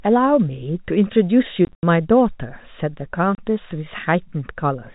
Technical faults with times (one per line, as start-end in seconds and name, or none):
1.65-1.83 packet loss filled with silence
3.35-3.38 packet loss filled with silence